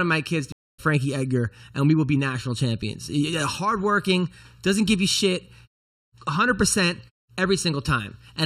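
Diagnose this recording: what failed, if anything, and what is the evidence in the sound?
Driver or buffer: one channel lags around 0.7 ms before mono summing, a channel delay whose comb filtering hollows the sound, with notches starting near 700 Hz.

Network: a stream reconnect after "of my kids to" silences 0.52 to 0.80 s, then the restarted decoder resumes roughly 0.2 s later, so material is skipped.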